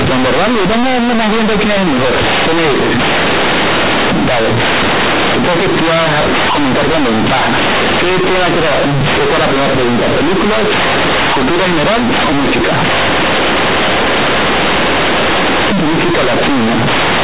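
From start to finish the speech comes out as very loud, harsh, buzzy distortion, with heavy noise filling the pauses. This is companded audio read as linear: A-law telephone bytes are played as plain 8-bit samples without expansion, so every sign change swings across half the range.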